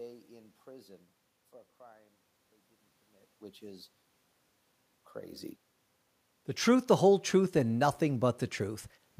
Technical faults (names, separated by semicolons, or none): zipper noise